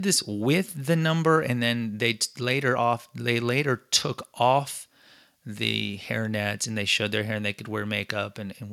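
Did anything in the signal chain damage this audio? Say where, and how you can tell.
No, nothing in the signal chain damaged this recording.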